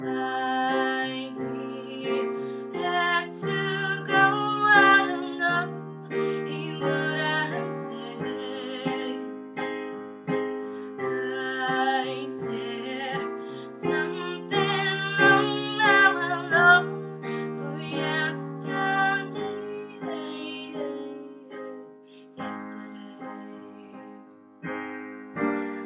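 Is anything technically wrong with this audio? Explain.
No, the signal holds steady throughout, with no technical fault to be heard anywhere in it.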